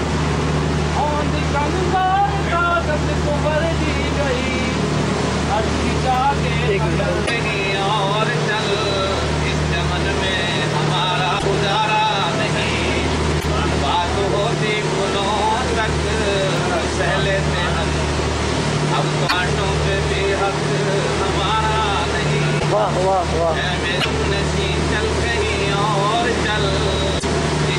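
At 7.25, 11.38, 13.39, 19.27, 22.58, 24.0 and 27.18 s the audio stumbles for about 56 ms, roughly two 26.1 ms MP3 frames, and jumps ahead. The likely cause is a broken MP3 bit reservoir: frames went missing, so the next frames reached back for borrowed data and decoded the wrong bytes. On a spectrogram each event is a narrow vertical band of disturbed energy or a gap, and the waveform breaks its continuity there.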